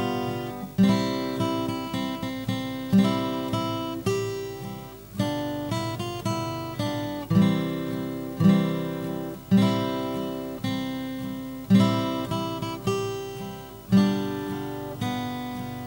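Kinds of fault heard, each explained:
Video or display buzz: A screen or video cable is leaking into the audio path. Throughout the clip a buzz sits at 50 Hz, the picture's field rate, with hash above it. A high tone near 15.6 kHz marks the line rate. The buzz is roughly 20 dB below the sound.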